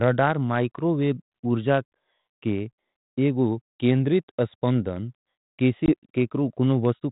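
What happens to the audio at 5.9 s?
At 5.86 s, packet loss on an ADPCM call cuts a hard-edged 20 ms silent gap. With the decoder's predictor and step size knocked out of step, sound resumes slightly distorted until 5.94 s. Waveform: flat gap. Spectrogram: blank stripe.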